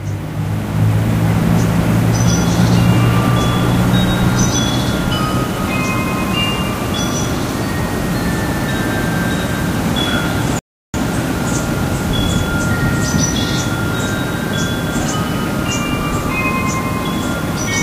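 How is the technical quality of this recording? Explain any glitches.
The recording has one glitch, a rebuffering stall from 10.59 to 10.94 s. The player drained its downloaded audio and paused until more data arrived, so the sound drops to silence for about 0.35 s, then picks up exactly where it stopped, with nothing missing.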